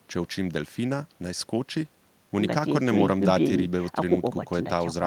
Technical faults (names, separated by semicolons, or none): none